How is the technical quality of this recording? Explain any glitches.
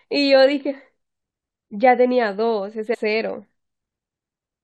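One glitch stands out in the speech, a brief glitch from 2.93 to 2.95 s. That short disturbance is the sound of damaged data in a compressed stream. A small stretch of the encoded file was corrupted, so the decoder could not read those frames properly and lost its place. While it hunted for the next valid frame header, it produced about 20 ms of disrupted output before normal decoding resumed.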